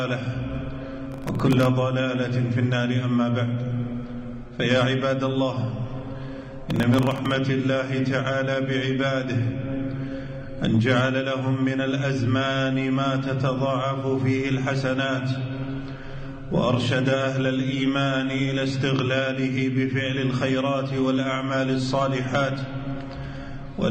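Twice the audio breaks into processor overload crackle: from 1.12 to 1.65 s and again from 6.70 to 7.36 s, a gritty tearing rides over the sound. Each burst fits a very short buffer, well under a millisecond, missing about twenty deadlines in a row, with stale audio repeated in the gaps. On a waveform, each stretch shows jagged discontinuities with hard edges. A spectrogram shows vertical broadband streaks clustered across each half-second span.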